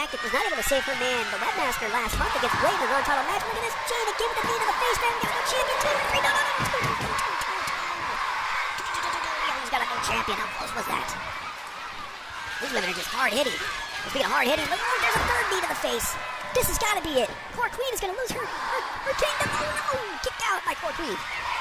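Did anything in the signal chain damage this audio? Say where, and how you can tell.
Yes. A wrong sample rate at playback affects the whole clip: the audio runs about 1.45 times too fast and sits about 6.45 semitones high. That ratio fits material recorded near 22 kHz and played at 32 kHz without conversion. Unlike pitch shifting or time stretching, speed and pitch rise together.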